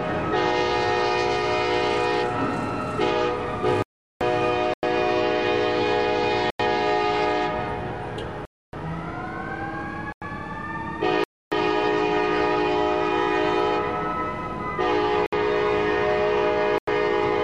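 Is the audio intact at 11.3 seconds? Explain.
No. At 11.3 seconds the audio falls into a block of digital silence lasting from 11.24 to 11.52 s, about 280 ms. A run of samples was replaced by zeros. The sound stops abruptly and resumes without a fade. It is heard as a short hole.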